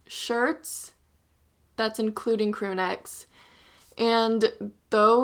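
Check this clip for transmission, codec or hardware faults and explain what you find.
No faults can be heard in this speech recording. There is nothing in it that needs explaining.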